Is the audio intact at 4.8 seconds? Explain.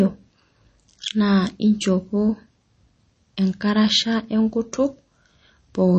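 No. At 4.8 seconds, as throughout the speech, the sound carries what is likely MP3 compression damage, plainly audible and consistent with a low bitrate near 32 kbps. Short of bits, the encoder cuts the treble and drops weak frequency lines that flicker on and off between frames, giving a watery, swirly texture and smeared consonants. A spectrogram shows a hard ceiling at 8.3 kHz with nothing above it, and patchy, speckled holes below.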